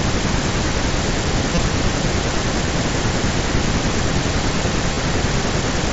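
Concealed Bluetooth headset packet loss occurs at 1.55–1.57 s, 2.66 s and 4.94–4.97 s. Lost headset packets were patched by repeating the best-matching recent waveform, which produces brief buzzy, level-held tones. The waveform shows copied cycles, and a spectrogram shows frozen harmonics below mSBC's 8 kHz ceiling.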